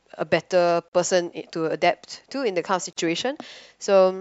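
A speech clip with a gap at a join of encoded pieces, occurring twice: a 43 ms silence from 0.88 to 0.93 s and a 38 ms silence from 2.93 to 2.97 s, two seconds apart. The sound stops abruptly, with edges smeared by the codec, then resumes where it left off. The regular spacing fits audio encoded in two-second segments and concatenated without trimming each run's start-up delay and final-frame padding.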